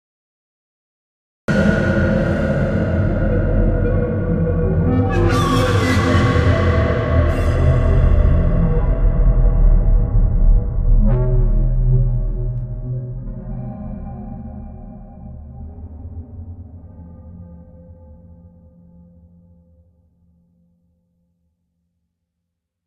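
The first 1.48 s are digital silence. At 1.48 s the sound begins abruptly, mid-event, with no natural attack. This is a cut-off start: capture began late.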